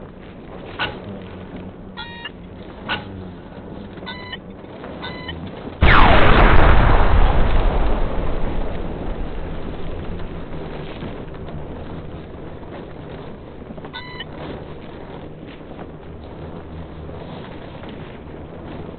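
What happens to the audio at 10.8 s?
Wrong sample rate is at work at 10.8 s, as it is for the entire clip. The samples are being played back at a slower rate than they were captured at, with no conversion in between, so everything runs at one third of its proper speed and drops about 19 semitones in pitch. That ratio fits 48 kHz material played at 16 kHz. The sound is dragged out, sluggish and deep, with every feature stretched to three times its length.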